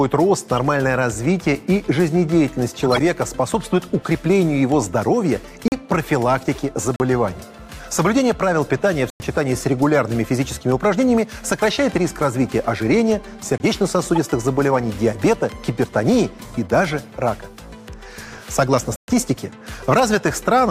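A brief squeak or blip of misplaced noise at 0.57 s is a corrupt frame decoded. Damaged compressed data was played anyway, throwing energy into the wrong frequencies. Longer chirpy bursts at 2.79–3.01 s and 6.55–6.62 s span several frames.

Abrupt 40 ms holes sound at 5.68–5.72 s and 6.96–7.00 s. These are blocks of digital silence, where samples were replaced by zeros with no fade. A 100 ms gap follows at 9.10–9.20 s and a 21 ms gap at 13.58–13.60 s.

Corrupt-frame bursts return at 14.15–14.20 s and as a single blip at 16.91 s. A final 120 ms silent hole opens at 18.96–19.08 s.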